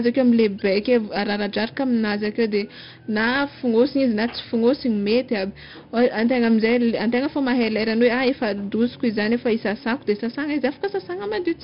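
4-bit ADPCM compression runs throughout: each sample is stored as a coarse step from a prediction, so heavy gritty hiss rides on louder speech and sharp onsets distort. Nothing sounds above 5.3 kHz, which fits a low-rate, roughly 44 kbps encoding.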